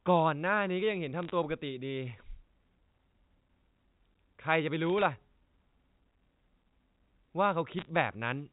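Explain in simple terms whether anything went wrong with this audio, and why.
Bit errors on a digital phone line cause short bursts of crackle at 1.23 to 1.31 s, 4.90 to 5.02 s and 7.79 to 7.89 s. A small fraction of the transmitted bits were flipped, and each flip corrupts one sample of this G.711 telephone audio; flips that hit a high bit make a sharp tick over the speech.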